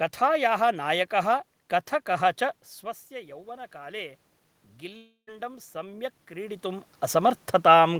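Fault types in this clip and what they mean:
automatic gain rising: The gain control hears the input drop by about 16 dB and slowly turns itself up to compensate. Here that happens twice, from 3.08 to 4.27 s with about 4 dB of added gain, then from 4.8 to 6.95 s with about 6 dB more. You can hear the voice and the room noise swell together over a second or two, rather than the talker simply getting louder.
long network dropout: Between 4.97 and 5.29 s there's a gap of roughly a third of a second where the real signal just isn't there. The receiver papers over it by stretching out the last bit of sound as a fading buzzy tail, which thins to near silence for the final 90 ms or so. When audio resumes, that stretch is gone for good. The likely cause is a run of packets that never arrived.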